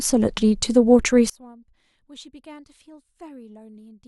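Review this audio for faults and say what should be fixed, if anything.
From 1.30 s right to the end, the speech drops by about 29 dB and turns faint. That points to one channel inverted: the likely cause is a polarity flip on one side, so the centred speech cancels when the channels sum to mono. Check polarity on every channel and run a quick mono fold-down before export to catch this early.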